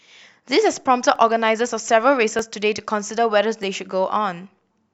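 From 1.16 s to 4.87 s, a click recurs every 1.24 s through the speech, about four times. These are clock drift buffer slips. Two clocks likely disagree by roughly 500 ppm, so a few dozen samples get dropped or repeated at each slip.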